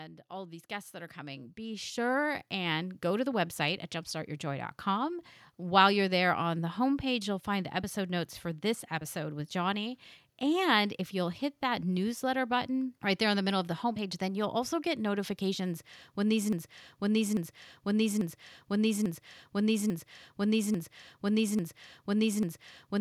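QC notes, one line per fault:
0.29–10.04 s, automatic gain rising: the gain control lifts a quiet input, so speech and background swell together by about 13 dB; the waveform envelope ramps steadily upward.
16.53 s to end, broken-record loop: a 0.84 s fragment repeats eight times back to back, likely from a stalled stream resending its last fragment; the spectrogram shows identical blocks.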